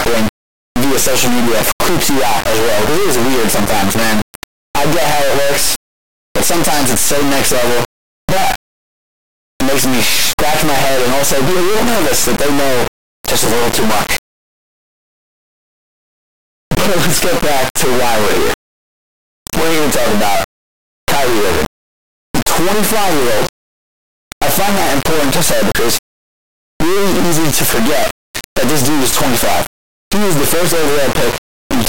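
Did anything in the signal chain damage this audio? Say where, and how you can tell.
Yes, and it's at the sample-format conversion stage, across the whole clip. The speech is gone; instead there's a brutally loud, buzzing square-wave blare that drops to silence in the quietest stretches. That's integer read as float: the 32-bit integer samples are being interpreted as 32-bit floats, so the bit patterns decode to values that are either nearly zero or wildly past full scale, and the output just slams between silence and the clipping limit.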